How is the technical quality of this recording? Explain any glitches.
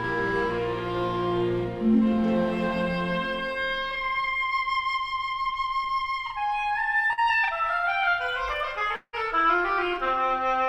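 The recording has a constant doubling throughout, plus three transmission glitches in the second half.

Channel delay (doubling): one channel runs 40 ms late, and summing both to mono leaves a same-level slap copy trailing every sound, giving a doubled feel.

Short concealed packet loss: at 5.53–5.57 s and 7.13–7.19 s, the decoder patched missing packets by extending the preceding sound, so you hear a quick smear or wobble before it blends back.

Long network dropout: around 8.95–9.15 s, the sound turns into a fading buzz or hiss, drops to a brief silence, then resumes with a piece missing, likely from a stretch where no packets arrived.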